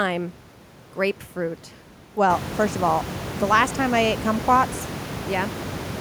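No technical faults in the speech; the room noise steps up by about 17 dB at around two and a half seconds and then sits about 11 dB below the voice, which is the recording environment and not the system.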